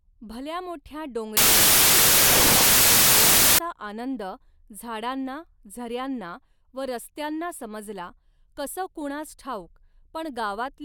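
From 1.37 to 3.59 s, a wrong sample width turns the speech into loud noise. It sounds like 32-bit data read as 16-bit, playing at half speed, an octave low.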